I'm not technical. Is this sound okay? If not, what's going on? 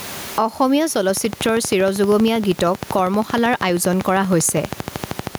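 No. Throughout the speech, loud and quiet parts sound squashed together. That's gain pumping, most likely from the microphone level being set far too high while a fast limiter keeps yanking it back down.

From 1.09 s to 5.36 s there's also a train of clicks: steady, evenly spaced ticking, about 12.7 per second, audible over the speech and in the gaps. Something is injecting these pulses, likely interference from nearby equipment or a faulty connection or power supply.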